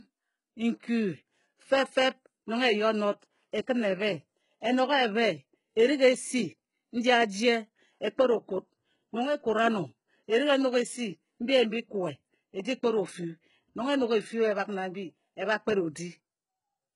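Speech, with heavy HE-AAC compression damage throughout: the treble sounds synthetic, with gritty, lispy s sounds and nothing above 11.1 kHz. This is likely spectral band replication rebuilding the upper band from copied lower bands, which fits a very low bitrate near 12 kbps.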